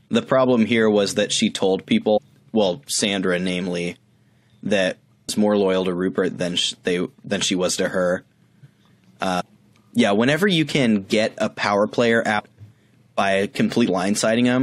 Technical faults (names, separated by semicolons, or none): compressed frames skipped